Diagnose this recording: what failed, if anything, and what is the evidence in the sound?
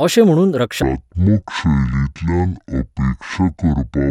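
From 0.82 s, right after "अशें म्हणून", the speech turns slow and deep, about ten semitones lower at 0.52x speed: a section at the wrong speed, likely from a playback-clock mismatch.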